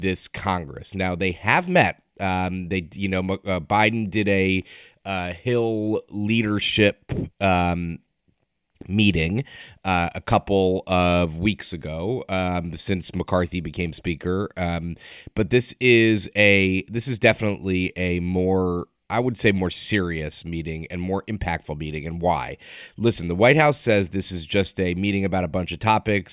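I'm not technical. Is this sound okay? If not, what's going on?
Yes, the recording is technically sound, with nothing in the signal that points to a problem.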